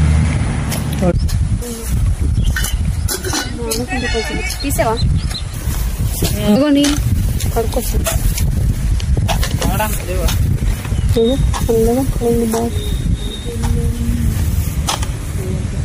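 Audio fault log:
throughout: MP3 compression, likely the cause of the watery, swirling texture. Weak detail flickers in and out between frames, which fits a low bitrate near 64 kbps. Unlike a plain low-pass filter, this comes with that swirl and with smeared attacks.
1.61 s, 5.53 s, 6.55 s, 9.97 s: compressed frames skipped. At each point the sound jumps forward without falling silent, losing roughly half a second at 1.61 s and 6.55 s and a few tenths of a second at the other two, in steps that fit frames of about 26 ms. Overlapping frames blur each join into a short smeared blip rather than a sharp click or a gap.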